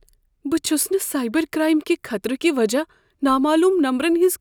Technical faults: none

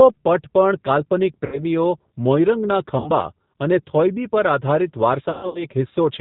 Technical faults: G.729 codec; VoIP packet loss concealed by the speech codec

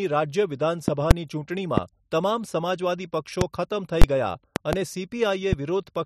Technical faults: loud pop; invalid numbers at full scale

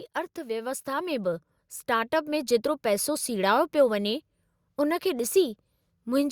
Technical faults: automatic gain rising

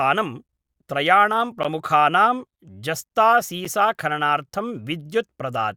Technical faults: gap between stream segments

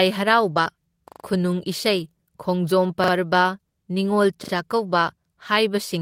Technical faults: short concealed packet loss; lost packet rebuilt from error correction; repeated buffer

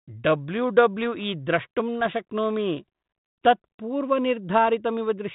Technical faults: bit errors on an ADPCM link

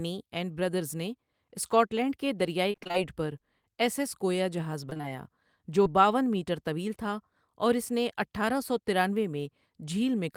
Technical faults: repeated packet loss (robotic sound); short concealed packet loss

